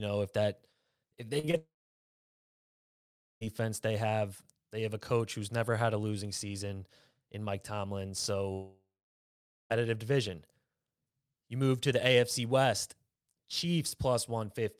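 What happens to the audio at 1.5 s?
Short concealed packet loss occurs at 1.39–1.45, 1.45–1.49 and 1.51–1.55 s. The receiver bridges 40, 20 and 20 ms gaps by extending the preceding sound, which is heard as brief smearing and wobble. From 1.57 to 3.43 s, a short fading continuation gives way to about 1.7 s of silence, and the audio then resumes with that stretch missing, likely a long network dropout.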